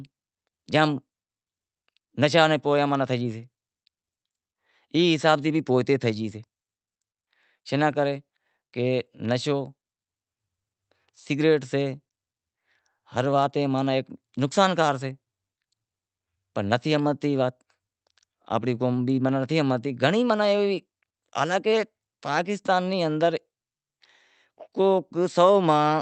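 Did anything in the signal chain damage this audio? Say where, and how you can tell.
No, nothing in the signal chain damaged this audio.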